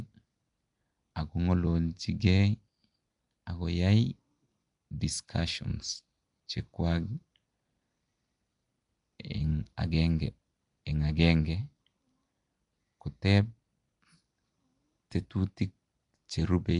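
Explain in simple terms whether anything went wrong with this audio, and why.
Something went wrong: the speech was most likely squeezed through Nellymoser compression, the old Flash microphone codec, across the whole clip. It spends very few bits, filling weak parts with noise, so voices sound rough, hissy and smeared, with nothing above about 10.6 kHz.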